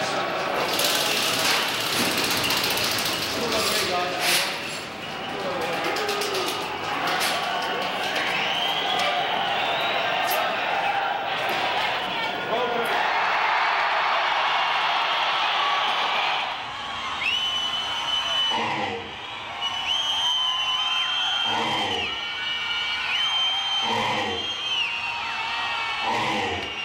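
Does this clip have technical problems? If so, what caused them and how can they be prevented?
No, there are no technical problems to report here.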